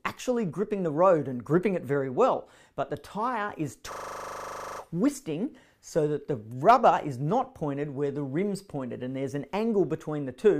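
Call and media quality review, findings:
System hang loop, 3.92 to 4.8 s. A 40 ms slice repeats exactly 22 times, giving a hard stutter-buzz at 25 Hz. Probable component: host or audio driver stalled while the device kept replaying its ring buffer. Unlike packet-loss concealment, the repeats are identical with no fading or smoothing. Unlike a dropout, there is no silence. Playback resumes with essentially nothing skipped.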